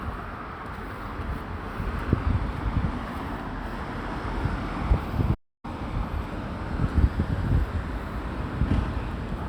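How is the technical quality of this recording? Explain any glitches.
One glitch affects the recording. At 5.34 s a playback stall cuts the sound to silence for about 0.29 s until 5.65 s, likely because the player ran out of buffered data or its thread was blocked.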